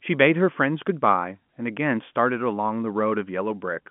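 Nothing's wrong here: it's just speech carried over an ordinary G.711 telephone line, so there's nothing above about 3.7 kHz, as you'd expect from a phone call, and no technical fault to point to.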